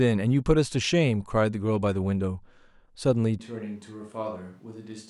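It's a short speech clip, and at 3.4 s the sound suddenly goes roomy and hollow, loses its low end, drops to roughly 10 dB quieter, and picks up background noise sitting only about 35 dB under the speech. It stays that way to the end. That's a switch to a distant microphone: most likely the close mic's feed dropped out and the recording fell back on something further off, like a camera mic, which hears far more of the room.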